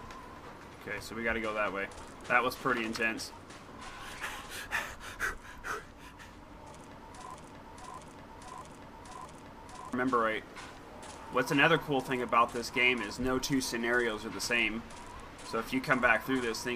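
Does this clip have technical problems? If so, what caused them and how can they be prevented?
Yes. A broken-record loop runs from 7.34 to 9.93 s: a 636 ms fragment repeats four times back to back, likely from a stalled player or stream resending its last buffer. On a spectrogram it shows as identical tiled blocks, and the audio meant for that span is lost. Prevent it by monitoring for stalls and resetting the buffer rather than replaying stale data.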